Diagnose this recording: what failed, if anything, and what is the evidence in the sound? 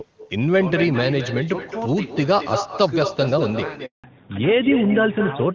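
The far end's echo cancellation failed or is absent, a call-processing fault. Their loudspeaker output is reaching their microphone and coming straight back down the line. Throughout the recording every phrase is shadowed by a thinner copy about 9 dB below the direct speech and trailing it by roughly a fifth of a second. That delay is the network round trip, so this is echo with no canceller, not room reverberation at the near end.

A network handover gap opens at 3.86 s and lasts until 4.04 s. While the phone moved the call between networks, no speech frames were delivered for 180 ms. The speech dies away abruptly at 3.86 s, and the stretch until 4.04 s is silent. Whatever was spoken there is gone, not concealed, because the receiver had nothing to decode until the new link came up.

Right after the gap, from 4.04 s to the end, the codec falls back to narrowband. Before the handover the HD Voice link carries energy well above 4 kHz with little audible coding damage. 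After it, nothing above 4 kHz survives, so sibilants lose their edge and the voice turns duller and rougher. That fits the new network negotiating AMR narrowband, probably its 12.2 kbit/s mode, instead of restoring AMR-WB.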